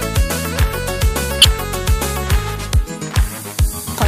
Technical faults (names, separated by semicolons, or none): corrupt frame decoded